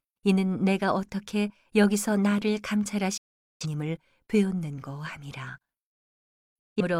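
At 3.17 s the speech drops out in a digital broadcast dropout: the receiver stops getting usable frames and mutes, fading out over about 8 ms and staying silent until 3.66 s. A second, shorter hole runs from 6.58 to 6.82 s. Each gap is a clean silence rather than noise, and the speech that was sent during it is simply missing. The lengths fit a run of about ten lost frames and then about four.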